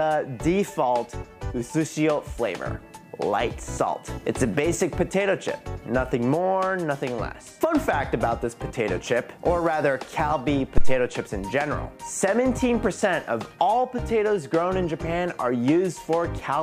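At 10.78 s there's a classic phantom power thump: a supply got switched on a live input and the voltage step pushed through the coupling capacitors. It's a deep low thud peaking around -6 dBFS, dying away in about 53 ms and clear by 11.01 s.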